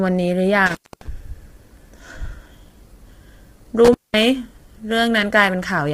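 The speech is rough and grainy from start to finish, with a hashed, noisy fill between the voice's harmonics and a top band that sounds thin and synthetic. This heavy damage is likely from low-delay AAC compression. The short frames of AAC-ELD cannot resolve pitch harmonics cleanly, and the degree of damage fits a low rate around 24 kbps. Unlike broadband background noise, the grain follows the voice and vanishes in its pauses.

An intermittent contact then breaks the line twice. The first break runs from 0.66 to 1.08 s, with the signal gone for about 267 ms. The second runs from 3.85 to 4.23 s, with an opening of about 199 ms. Each gap begins and ends with crackle, as a loose plug or cable lets the circuit open and close. During the gap faint hiss remains. That crackle and hiss set it apart from a network dropout, which leaves clean silence or smoothed-over filler.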